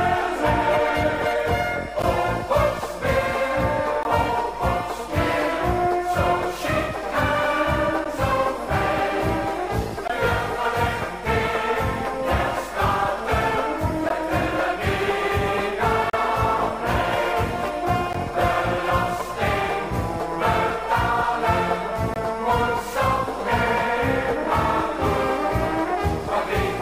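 Segment timestamps leave small gaps at the 2-second segment boundaries, so the gap between stream segments plays as hard-edged silent holes of 12 to 35 ms at 2.02, 4.03, 8.04, 10.08, 14.09, 16.10 to 16.13, 18.13 and 22.14 to 22.16 s.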